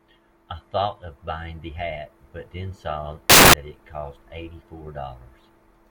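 From 3.30 to 3.54 s, the reader assembled each sample from the wrong bytes, through an off-by-one offset, swapped byte order or a misjudged alignment. The rapidly changing low-order bits end up in the most significant position, so for about a quarter of a second the speech gives way to a burst of loud, harsh broadband noise.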